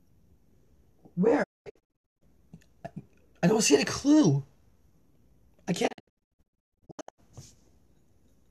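The receiver lost the digital broadcast signal twice, muting whenever frames failed. This caused a digital broadcast dropout from 1.42 to 2.23 s and again from 5.86 to 7.20 s. The audio fades out in about 20 ms into scattered silent holes up to 216 ms long, and the material in those gaps is lost.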